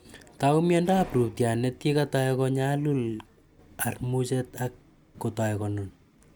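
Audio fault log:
Nothing to log here; the speech comes through with no faults to report.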